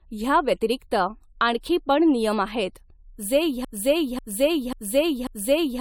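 Across the whole speech recording the sound is swirly, smeared and hollow, with blurred attacks and nothing above about 19.6 kHz. This is generation loss, likely from repeated AAC-LC encoding at around 96 kbit/s, perhaps five passes, each requantising on a shifted frame grid so the noise and spectral holes pile up. Just after "नियम आहेत जे", at 3.65 s, a 0.54 s fragment starts repeating exactly, back to back, four times through to the end. This broken-record loop likely comes from a stalled player, encoder or stream that kept resending its last buffered piece, so the speech that should have followed is lost.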